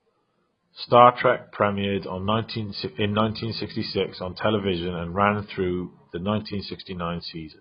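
From start to end, the speech is heavily damaged by what is likely AAC compression. Nothing is heard above 5.1 kHz, and the remaining band is dull and smeared, with a warbling, fizzy texture on sibilants and held sounds. This fits AAC-LC at a very low bitrate, around 16 kbps, where the coder lowers its cut-off and starves the quantised frequency lines. A simple low-pass filter would cut the top just as cleanly, but it would leave the remaining band intact rather than swirling.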